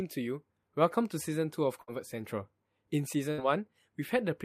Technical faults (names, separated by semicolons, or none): burst of packet loss